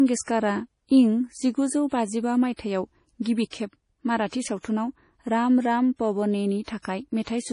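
From start to finish the speech carries heavy MP3 compression artefacts: nothing survives above 10.5 kHz, and weak spectral detail flickers on and off, giving a watery, swirling texture. That points to a likely starved encoder near 32 kbps, unlike a plain low-pass filter, which would dull without swirling.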